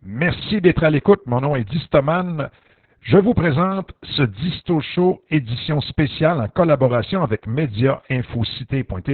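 Opus voice compression runs through the whole clip, with heavy damage. The coder is working in its SILK linear-prediction mode at narrowband, so almost nothing survives above about 4.3 kHz, and the excitation is coded very coarsely, which points to a bitrate around 6 kbps and long frames near 60 ms. The speech sounds muffled and telephone-thin, with a hoarse, buzzy, slightly robotic texture.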